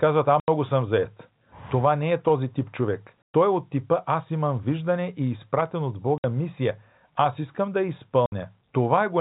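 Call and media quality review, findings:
Hard-edged silent gaps at 0.40–0.48, 3.23–3.34, 6.18–6.24 and 8.26–8.32 s. Packet loss filled with silence: gaps of 80, 120, 60 and 60 ms, which fits 20 ms packets. Audio band-limited below 4 kHz from G.711 telephone coding.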